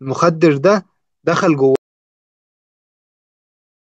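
At 1.76 s the speech cuts to an audio dropout to silence, silence without room tone until the end, likely from lost input.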